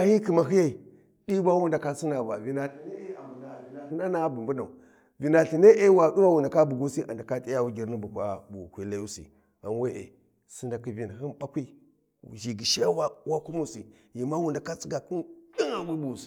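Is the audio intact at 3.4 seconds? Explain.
No. From 2.68 to 3.90 s the sound turns abruptly hollow and roomy, thinner in the bass and roughly 10 dB quieter, with more room noise: a switch to a distant microphone, likely after the close one dropped out. The sudden change in both directions, plus the noise and bass shift, sets it apart from a simple gain dip or added reverb.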